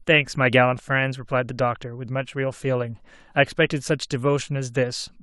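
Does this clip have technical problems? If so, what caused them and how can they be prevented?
No, there are no technical faults to be heard in this speech recording. With nothing going wrong, there is nothing here that needs preventing.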